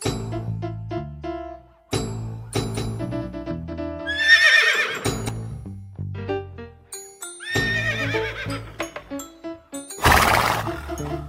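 From 2.55 s to 5.29 s a doubled audio track appears. A somewhat quieter full-band copy trails by about a fifth of a second, likely from a slower second capture path. Spectrograms show every feature repeated at that fixed offset, starting and stopping abruptly.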